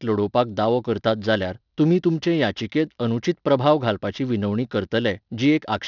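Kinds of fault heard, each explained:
aliasing: Sibilants turn gritty and metallic, with energy pressed up against 6 kHz, as speech above that folded back unfiltered, fitting a resample to 12 kHz.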